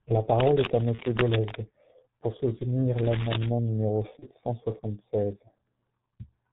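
G.723.1 codec coding runs through the whole recording. Nothing above 4 kHz survives, and the slowly updated voice model leaves the speech muffled and hoarse with smeared consonants. The heavy damage fits a very low rate around 6 kbit/s.

Cable scratch noise appears from 0.32 to 1.57 s: dense, irregular rustling and scratching sits over the speech at nearly the same loudness. The likely cause is a worn cable or connector being moved, making its contact resistance jump rapidly.

VoIP packet loss concealed by the speech codec occurs at 0.96 to 1.01 s, inside the scratching, and again at 4.19 to 4.25 s. Each gap is consistent with one lost 30 ms frame. The decoder extends its last pitch and filter at falling gain, giving a brief fading stretch of buzzy tone or coloured noise, and the voice stays weak for a moment afterwards.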